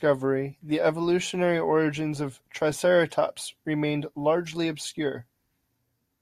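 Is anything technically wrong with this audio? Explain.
No, nothing technically wrong can be heard here.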